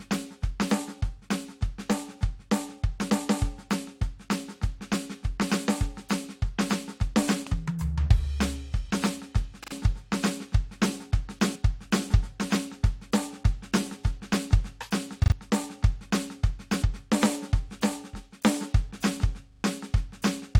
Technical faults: damaged data in a compressed stream; repeated buffer

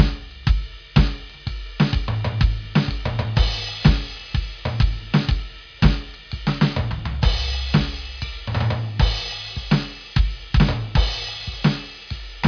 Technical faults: none

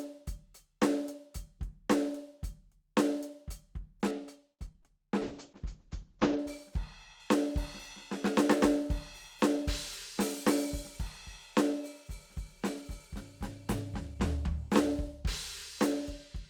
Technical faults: de-emphasis applied wrongly; repeated packet loss (robotic sound); call bitrate drop

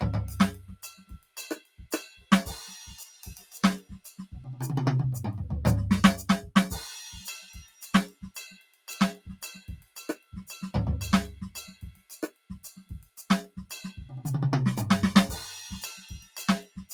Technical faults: noise suppressor applied to music or sounds; sound cut by the noise suppressor

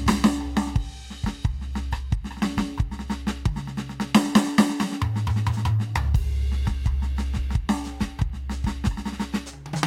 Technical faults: none

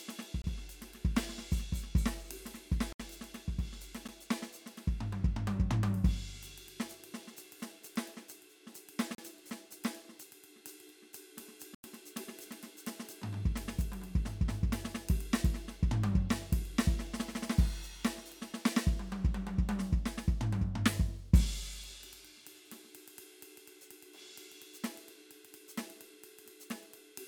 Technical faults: block of digital silence

